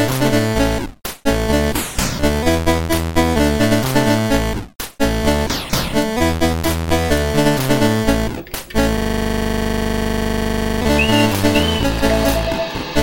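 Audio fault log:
8.97–10.81 s, system hang loop: the system froze while the hardware kept replaying one 40 ms slice of its ring buffer dozens of times, giving a rigid 25 Hz buzzing stutter. The waveform shows one identical block repeating; the spectrogram shows evenly spaced vertical stripes.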